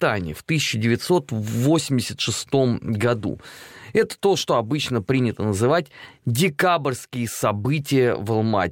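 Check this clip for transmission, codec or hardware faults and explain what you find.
No transmission, codec or hardware faults turned up in this clip.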